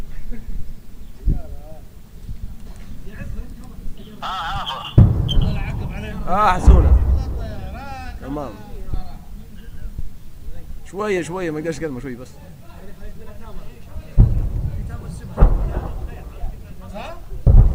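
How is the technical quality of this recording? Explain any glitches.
No glitches or technical faults can be heard here.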